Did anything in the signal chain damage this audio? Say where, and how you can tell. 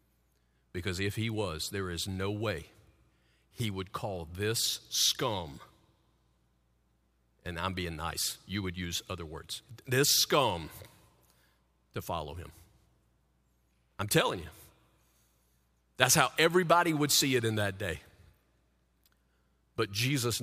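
No, nothing along the way seems to have hurt this speech recording, and there's nothing here that points back to any particular stage of the chain.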